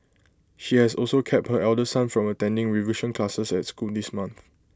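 No technical faults can be heard anywhere in the recording. Nothing in the audio calls for comment at any point along its run.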